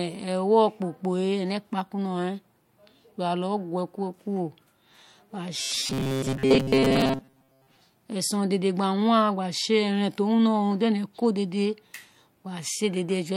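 From 5.55 to 7.77 s the speech becomes a rigid, metallic buzz near 133 Hz. That is robotic sound from repeated short buffers. Most of the audio is a replayed buffer fragment, likely caused by late-arriving data. The buzz keeps a fixed pitch rather than warbling.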